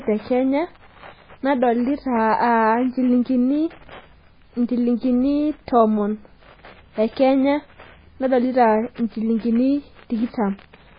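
Watery, swirling speech with nothing above 5 kHz runs throughout, likely from MP3 compression at a very low bitrate, about 16 kbps, zeroing weak frequency lines.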